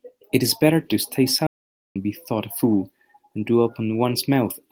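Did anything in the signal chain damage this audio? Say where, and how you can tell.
Yes, at the playback stage: a playback stall cuts the speech off mid-flow at 1.47 s and leaves silence for about 0.49 s, until 1.96 s. The likely cause is a starved buffer or blocked player thread. Unlike a natural pause, the sound stops abruptly mid-flow.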